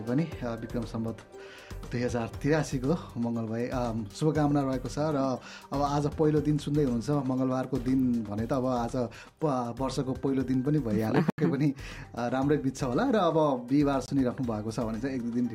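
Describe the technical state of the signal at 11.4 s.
At 11.4 s the signal has just come back from a block of digital silence. From 11.30 to 11.38 s, about 80 ms of the signal drops to silence. The output buffer was not filled in time, or a calculation produced invalid values, so zeros went out instead. There is no fade on either side. The sound cuts off abruptly, leaves a short hole, and returns.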